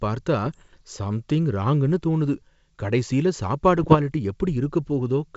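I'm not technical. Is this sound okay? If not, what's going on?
No. There are short crackly pops and rough bursts from 0.46 to 0.81 s, just before "சம்திங் ராங்குனு தோணுது கடைசியில", and again from 3.77 to 3.97 s, right after it. These are bit errors on an ADPCM link: a few bits in the wideband G.722 phone signal got corrupted, and each error threw the decoder off briefly.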